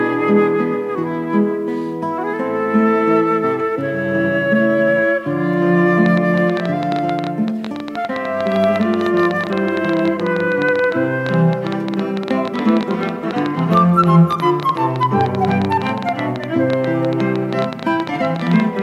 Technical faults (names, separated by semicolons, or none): train of clicks